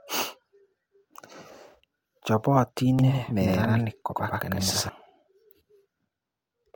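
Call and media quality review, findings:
Doubled audio track, 2.99 s to 4.89 s. Speech heard twice, second copy around 100 ms behind, at roughly equal level. Copy is full-band and dry, with no room colour. Starts and stops abruptly. Likely cause: second capture path or edit mixing a late duplicate.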